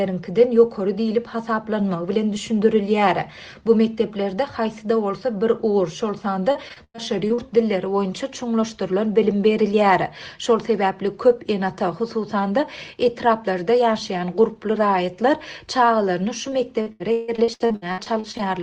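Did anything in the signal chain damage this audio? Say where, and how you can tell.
Yes. Repeated packet loss (robotic sound) damages the audio at 6.51–7.40 s and 16.50–18.41 s, which points to the network. Each dropout is patched by stretching the preceding sound, so gaps of up to 100 ms and 161 ms leave a choppy texture with pieces missing.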